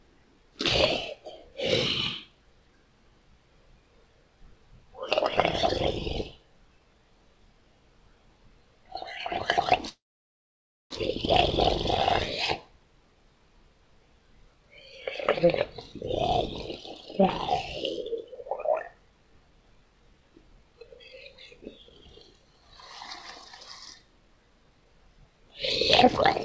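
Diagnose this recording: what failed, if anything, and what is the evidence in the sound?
At the network and jitter-buffer stage, a call audio freeze runs from 9.89 to 10.93 s, likely from packets stalling in transit until the buffer emptied. The last sound trails off, then about 0.93 s of silence follows. Playback resumes exactly where it stopped, so nothing is lost, but everything after arrives about 1 s late.

The same buffer then performs a jitter buffer speed-up to shed the backlog, repeatedly cutting out short pitch-period slices. From 18.02 to 22.75 s the sound runs at 116% speed, removing roughly 0.7 s. From 23.19 to 25.25 s it runs at 107%, removing about 0.15 s. Pitch holds steady, but events sound hurried, with the G.722 band limit at 8 kHz throughout.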